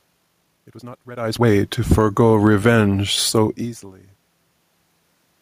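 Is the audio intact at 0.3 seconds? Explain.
No. From 0.0 to 1.5 s there is a time-stretched section: the sound runs at twice its normal pace, rushed, yet the pitch stays put. That points to software that likely squeezed this stretch by dropping short pieces, unlike a faster playback, which would raise the pitch.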